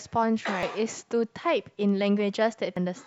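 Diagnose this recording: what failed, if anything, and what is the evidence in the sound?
The fault lies at the codec stage: damaged data in a compressed stream. Two brief glitches break into the speech, at 0.63 s and 2.77 s. Corrupted bytes made the decoder misread a frame, lose sync, and then resynchronise on the next valid frame header.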